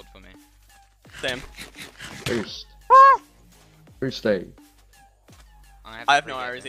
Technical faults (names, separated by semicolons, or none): none